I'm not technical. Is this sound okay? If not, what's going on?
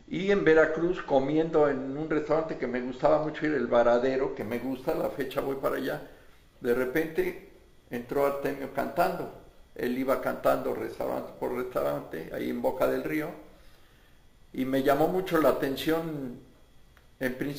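No. From 4.41 s to the end there's imaging from sample-and-hold upsampling: a bright metallic fizz that rises and falls with the sound, unlike steady hiss, and slides opposite to the pitch.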